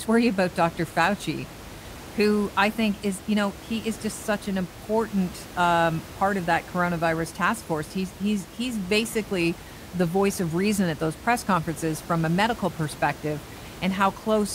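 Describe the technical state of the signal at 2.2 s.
At 2.2 s the signal is intact, with only the room's own background noise sitting about 17 dB below the speech.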